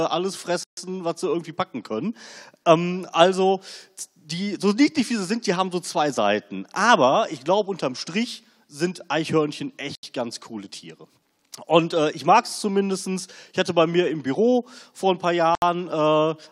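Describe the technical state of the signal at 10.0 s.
At 10.0 s the audio drops out completely: from 9.95 s to 10.03 s there is a gap of about 77 ms of silence, after which the sound carries on. This dropout is likely a Bluetooth stall. Radio interference delays packets on the wireless link, the headphones' buffer empties before replacements come in, and playback halts until the retransmitted packets arrive. The sound then resumes either where it stopped or a little further on, if queued audio was discarded.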